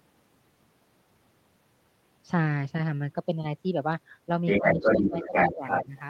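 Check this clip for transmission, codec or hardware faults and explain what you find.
Two related faults appear near the end of the speech.

From 4.47 to 6.0 s, the other side's voice leaking through is heard at about 5 dB above the talker, likely residual echo the canceller missed. On a spectrogram it shows as a second, unrelated harmonic pattern overlapping the talker's.

Speech suppressed in double talk occurs at 4.59–5.34, 5.55–5.63 and 5.82–5.96 s. The talker dips by about 10–15 dB, likely because the canceller ducked everything during overlap. The waveform shows sudden envelope notches.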